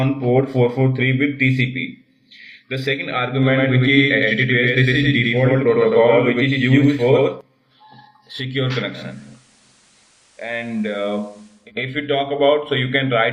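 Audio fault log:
3.43–7.41 s, doubled audio track: a second full-band copy of the sound runs alongside the original, trailing it by roughly a tenth of a second at about the same level, so every onset gets a hard, flam-like repeat. The copy has no decay or room colouring and cuts in and out abruptly at both ends. This is likely a second capture of the same source arriving through a slower path, or an edit leaving two misaligned copies stacked.
8.90–11.72 s, digital radio blending to analogue: the receiver appears to lose the digital stream and cross-fades to the FM broadcast of the same station over about 260 ms, then returns at the end of the range. The level drops by about 2 dB, and FM hiss rises to sit roughly 35 dB below the programme.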